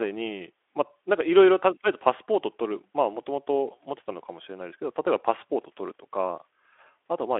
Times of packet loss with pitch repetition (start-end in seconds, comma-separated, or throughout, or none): none